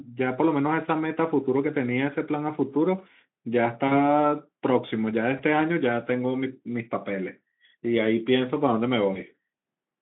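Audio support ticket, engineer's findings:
VoIP packet loss concealed by the speech codec, 3.88–4.02 s, 5.37–5.43 s and 9.13–9.18 s. Decoder extrapolates last pitch and filter, so the sound smears into a fading buzz or coloured noise with slow recovery. Spectrogram: frozen, blurred harmonics losing energy. Waveform: repeated periods decaying. The first gap fits two lost 20 ms frames.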